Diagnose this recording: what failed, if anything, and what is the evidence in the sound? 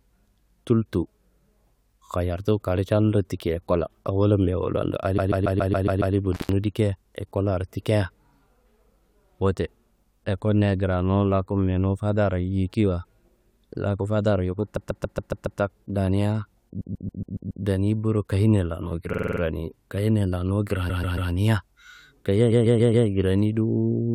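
Repeated frames at the storage or transmission stage: the speech stutters at 5.17–6.14 s, 14.76–15.59 s (after "laku fadaro yuku"), 16.80–17.64 s (before "boro kayenia lanu"), 19.12–19.40 s (after "boro kayenia lanu"), 20.89–21.31 s and 22.51–23.07 s. Each stutter loops a 139 ms block, or 46 ms at 19.12 s, which fits whole compressed frames being replayed. On a spectrogram and waveform the same pattern repeats like tiles.

Intermittent contact in the analogue wiring: at 6.33–6.52 s the signal drops out for about 129 ms, with crackle at both edges where the loose connection breaks and remakes. The waveform shows a near-flat gap holding only faint hiss, framed by sharp spikes. The spectrogram shows a dark band with broadband streaks at its borders.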